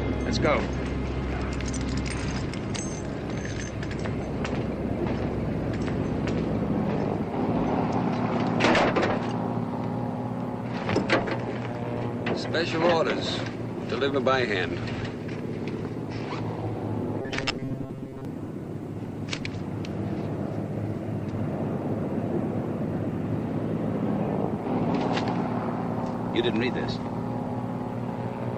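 From 17.22 to 18.25 s the audio collapses into robotic sound from repeated short buffers: a rigid, metallic buzz at 134 Hz that still loosely tracks the underlying sound. The likely cause is audio arriving too seldom, so playback loops a slice of roughly 7.5 ms, covering about half the stretch while real material is skipped. A spectrogram shows evenly spaced horizontal lines at multiples of 134 Hz, and the waveform shows identical cycles repeating every 7.5 ms.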